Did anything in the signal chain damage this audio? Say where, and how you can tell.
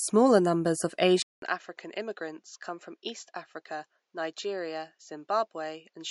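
Yes. MP3 compression runs through the whole clip, at the codec stage. The speech has nothing above 11.2 kHz, and it has a plainly audible watery, swirly texture on sibilants. That is likely a starved MP3 encoder dropping treble and weak spectral lines, consistent with about 48 kbps.

Input switched to a poorer device at 1.22 s, at the capture stage, right after "numbers of". A gap of about 200 ms is followed by duller audio, band-limited at 7.6 kHz. The level drops roughly 10 dB and a new noise floor sits about 50 dB below the speech. That likely points to the system swapping to a narrower-band microphone or headset.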